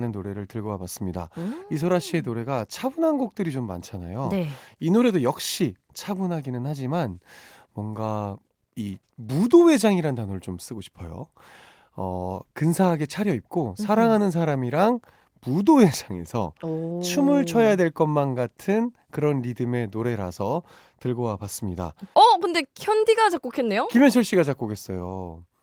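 No technical faults can be heard anywhere in the recording.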